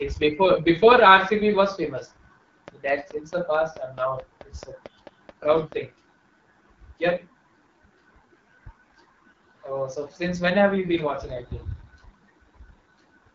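From start to finish the speech carries the sound of the AMR wideband (HD Voice) codec, plainly audible: a rough, raspy quality, which fits the 8.85 kbit/s mode, the second-lowest rate. The pulse-driven vocal tract model can't track the voice at so few bits. Nothing lies above 7.3 kHz, and the top band sounds like hiss rather than real detail. That separates it from narrowband AMR, which stops near 3.4 kHz and sounds muffled rather than raspy.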